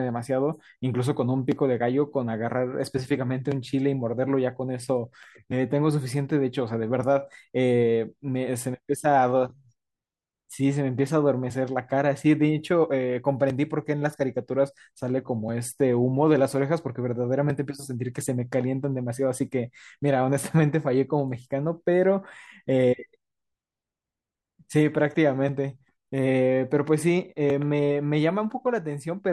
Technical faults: none

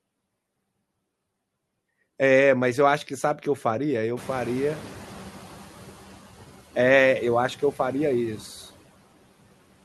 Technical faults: noise suppressor artifacts; noise suppressor catching up

